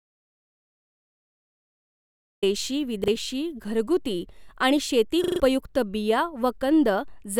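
The speech starts in silence, with no room tone at all, and stays that way until 2.43 s, where the sound comes in mid-flow. This is an audio dropout to silence already under way when the clip begins. The likely cause is a lost input, such as a disconnected device, a failed link or a mute, while the recorder kept writing silence. Whatever was spoken before 2.43 s is gone.

Two repeated-buffer faults follow. At 3.04 to 3.08 s a 40 ms slice sounds twice with a hard join. The device ran short of new audio and replayed its last block, which fits a 40 ms buffer. The result is a brief stutter and about 40 ms of speech missing. At 5.24 to 5.4 s the same thing happens more severely. One 40 ms slice plays five times in a row, giving a longer stutter that replaces roughly 150 ms of speech.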